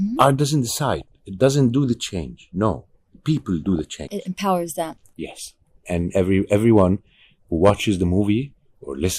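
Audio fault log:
0.92–1.12 s (ending just before "it doesn't do the"), 3.64–4.15 s, 5.46–5.74 s (just after "empowers them"): DAB burbling. Bit errors slipping past error correction corrupt samples and scale factors in the coded frames, so single sub-bands jump in level frame by frame, giving short blips of noise in single sub-bands over the speech. Unlike steady low-bitrate codec smearing, it comes in short bursts. Unlike packet loss, the sound keeps running with no gaps.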